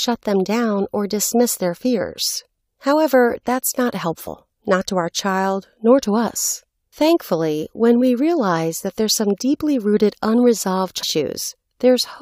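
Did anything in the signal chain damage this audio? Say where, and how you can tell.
Yes. The damage happens at the codec stage, from damaged data in the compressed stream. Two brief glitches interrupt the speech, at 4.26 s and at 11.02 s. Each lasts only about 12 to 16 ms. Corrupted bytes reached the decoder. It misread those frames, lost sync, and produced garbage until it locked onto the next valid frame header.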